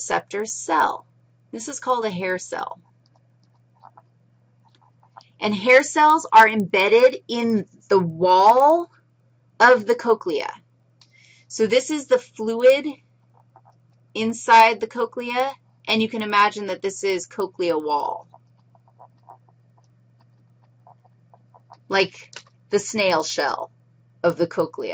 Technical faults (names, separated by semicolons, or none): resampler restarted on every block